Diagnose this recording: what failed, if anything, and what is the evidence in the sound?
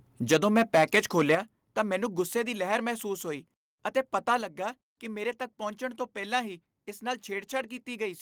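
Microphone overload, at the converter input, from 0.3 to 1.35 s: the loudest peaks of the speech are flattened, giving a harsh, crackling edge. The input is about 8 dB too hot, so a few percent of samples hit the converter's limit, likely from excessive analogue gain ahead of the converter.

Microphone volume stepped down, in call processing: the speech and background drop together in single steps of about 2 dB at 0.34 s, about 7 dB at 1.35 s and about 4 dB at 4.41 s. These are likely automatic gain control cutting the device input level after detecting a too-loud or clipping input.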